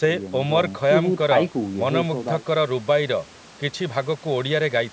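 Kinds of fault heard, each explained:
Nothing stood out on listening; the speech carries the usual traits of a call microphone path, with the lowest bass trimmed and nothing above 8 kHz, and none of it registers as a fault.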